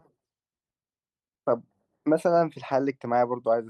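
No technical faults are audible.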